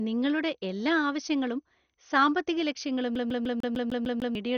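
A speech clip. The sound is dull and gurgling throughout, with nothing above 6.5 kHz, likely MP2 compression at a low rate such as 48 kbps. From 3.15 to 4.35 s, a CD stuck on one turn repeats the same 150 ms slice eight times, each jump marked by a brief mute.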